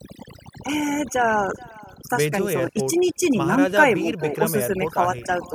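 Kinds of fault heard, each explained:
Overdone noise removal: The noise reduction was pushed too hard, so any frequency band sitting near its noise estimate gets pulled way down or cut out, quiet bits of speech included. Here the background drops away and breaks into twinkly, warbling specks throughout the clip.
Echo with no canceller: The far end is playing the call over a speaker, their mic picks it up, and nothing strips it out. So the talker's speech returns after the network round trip, around 400 ms later and about 23 dB below the original, all the way through.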